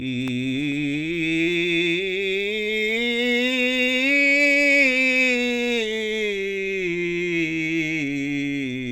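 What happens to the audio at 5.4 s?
Nothing goes wrong at 5.4 s; the music plays through that moment intact, with no dropout, click, glitch or change in level or tone.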